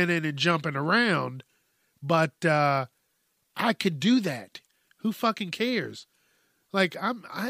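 At 4.01 s a hiss, about 16 dB up, creeps in roughly 11 ms before a sharp speech attack, leaving its onset smeared. This pre-echo comes from quantisation noise spread across a long transform block, which fits a 26 ms window with no switch to short blocks.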